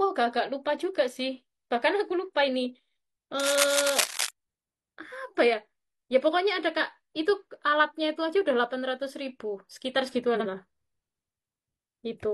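From 3.39 to 4.29 s, a worn cable or connector being moved likely changed its contact resistance rapidly, producing cable scratch noise: uneven scratching bursts roughly as loud as the speech. From 10.35 to 10.46 s, two adjacent blocks of about 46.4 ms each were decoded in swapped order, which fits single frames out of order. The result is a brief garbled flutter.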